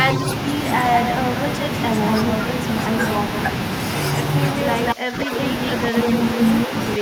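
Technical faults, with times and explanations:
4.57–6.66 s, echo leak: a copy of the speech returns about 193 ms late at roughly equal loudness, likely from a loudspeaker echo the far-end canceller failed to remove.
4.94–5.33 s and 5.91–7.01 s, speech suppressed in double talk: the talker dips by around 20 dB, then mildly, in short pieces, likely the canceller ducking both overlapping voices.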